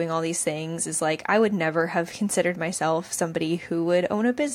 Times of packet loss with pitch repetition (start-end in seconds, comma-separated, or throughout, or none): none